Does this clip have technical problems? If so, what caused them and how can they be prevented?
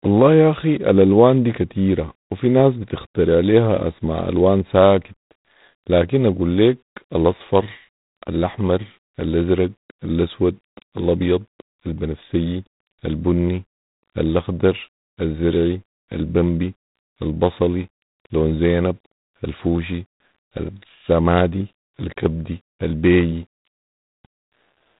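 Yes. Throughout, the speech carries a harsh, rasping hiss that rises and falls with its level, and nothing passes above 3.9 kHz. This is plainly audible G.726 ADPCM coding damage, consistent with the 24 kbit/s mode, where too few bits per sample quantise the prediction error coarsely. To prevent it, use 32 kbit/s or a wideband codec.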